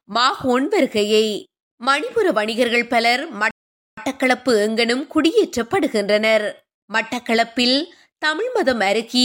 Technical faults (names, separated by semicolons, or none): rebuffering stall